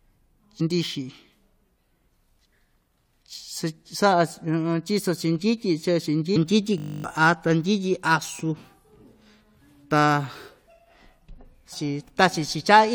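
At 0.59 s, 6.35–6.37 s and 11.72–11.74 s, damaged data in the compressed stream makes the decoder lose sync and resume at the next frame, giving brief glitches. Each appears as a short broadband smear on a spectrogram and a glitch in the waveform.

From 6.78 to 7.04 s, a system hang loop repeats one 20 ms piece of buffer 13 times, producing a steady 50 Hz buzz and dropping about a third of a second of sound. The spectrogram shows evenly spaced 50 Hz harmonic lines, and the waveform shows identical repeating cycles.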